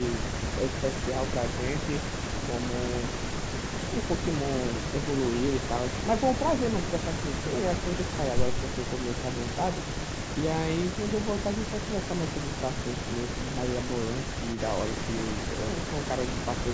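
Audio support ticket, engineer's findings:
Echo leak, 14.53–14.6 s: short, faint delayed copy of the speech, about 20 dB down, lagging 386 ms. It is a discrete repeat rather than reverb smear. Likely loudspeaker pickup slipping past the far-end echo canceller and being sent back.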